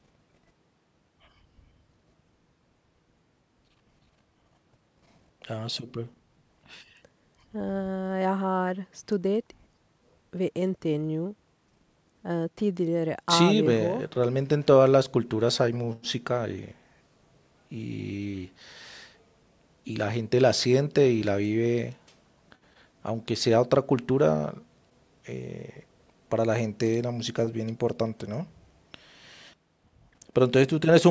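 No technical faults are audible in this speech.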